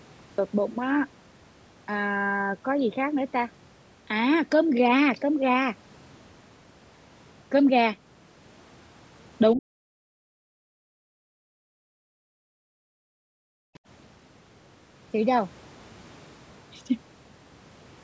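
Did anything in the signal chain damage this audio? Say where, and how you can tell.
Yes. The speech starts abruptly out of digital silence, with no natural onset: the first 0.38 s is empty and the sound begins mid-utterance at 0.38 s. This is a cut-off start at the capture or storage stage. Recording began after the talker was already speaking, so the opening of that sound was never written. The hard edge where silence meets a running waveform is the giveaway.

The talker's level collapses in three places: 9.56 to 9.97 s, 10.13 to 12.71 s, and 13.29 to 13.64 s. Each time the voice sinks by around 40 dB, close to vanishing, then returns. The longest stretch loses about two seconds of speech in pieces. This is speech suppressed in double talk, likely from the call's echo canceller. With both sides talking at once, it could not tell near speech from loudspeaker echo and attenuated everything.

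Right after, at 13.74 to 13.79 s, a brief faint scrap of a second voice appears for about 50 ms, some 35 dB below the talker. This is the other side's voice leaking through. Its likely cause is the same call-processing stage: the far end played on the talker's loudspeaker, and the echo canceller left a residue in the microphone signal. The capture is band-limited to 8 kHz, in line with the call's microphone processing.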